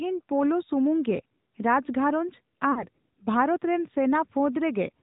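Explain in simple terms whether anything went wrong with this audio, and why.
The whole clip went through the AMR narrowband mobile codec, the old phone-call format. Everything above 4 kHz is gone, and the speech sounds buzzy and synthetic.

Around 2.72 to 2.86 s there are lost AMR speech frames. The decoder stretched the last good sound and faded it, so it briefly smears and dips. The missing stretch is about 40 ms, roughly two dropped frames.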